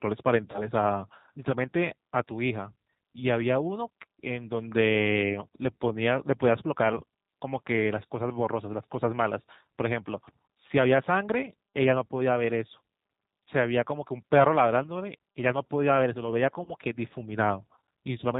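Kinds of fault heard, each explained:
G.729 codec: speech throughout sounds rough, slightly synthetic and muffled, lacking everything above 4 kHz, from a low-rate model rebuilding the voice at 8 kbit/s.
VoIP packet loss concealed by the speech codec: at 0.51 s and 16.64 s the voice smears into a brief buzzy tone or coloured noise that fades as the decoder extrapolates across a 30 ms gap.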